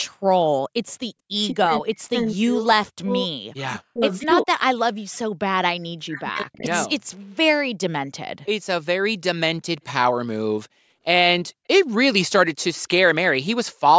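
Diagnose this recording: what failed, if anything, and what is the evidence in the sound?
Echo leak in the call processing: between 0.87 and 0.95 s a faint delayed copy of the speech appears, trailing the original by 212 ms and sitting very low, roughly 35 dB below the direct signal. The far end was most likely on a loudspeaker, and its echo canceller did not fully cancel what its microphone captured, so a short residual of our own signal was returned across the call.

Speech suppressed in double talk, also in the call processing: the speech level collapses, at its deepest by around 40 dB, during 1.52–3.34 s, 3.54–4.03 s, 4.23–4.54 s, 6.08–6.69 s and 6.86–7.16 s. The likely cause is the echo canceller seeing both sides active at once and, unable to separate the local talker from loudspeaker echo, attenuating everything it passed.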